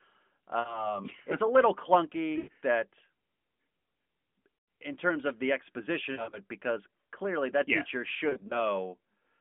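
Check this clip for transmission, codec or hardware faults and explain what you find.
The clip has lost AMR speech frames at five points, heard through narrowband AMR coding that sounds like the 12.2 kbps mode, with a 200 Hz to 3.5 kHz line band.

The gaps fall at 0.60 to 0.95 s, 2.38 to 2.50 s, and 4.58 to 4.68 s, just before "in terms of the". The next is 6.12 to 6.39 s, between "in terms of the" and "because clearly that yes", and the last is 8.30 to 8.66 s, after "clearly that yes teacher". Each loses 60 to 140 ms. The last two are scattered losses rather than one run.

Frames corrupted in radio transmission failed their checks, so the decoder repeated the last good pitch and vocal tract settings at falling gain. The result is brief dips and warbles. The longer runs smear and fade toward silence before the speech returns thin and rough.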